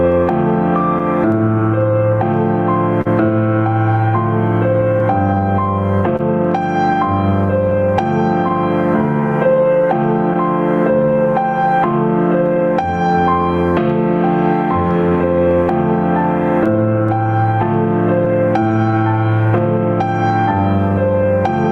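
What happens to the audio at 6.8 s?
At 6.8 s the sound sits inside a stretch of scattered short gaps, from 4.99 to 8.51 s. About four packets went missing there, one at a time. The receiver covered each hole by carrying the last sound forward. Each patch is brief, the longest around 30 ms, so they come through as small ticks or smears.

The same moment falls within repeated timing corrections running from 0.02 to 21.25 s. The sender's clock runs roughly 3% slow against the receiver. This is clock drift between sender and receiver. To keep in step, the receiver keeps repeating short pieces. Together they add around 400 ms, and playback runs at 98% speed. The result is small, unevenly spaced hiccups.

Gain pumping is also present. The level keeps dipping under louder sounds and swelling back in the quieter spaces, over a swing of about 10 dB. The likely cause is a gain set far too high, with a fast limiter or compressor pulling it down on each loud sound.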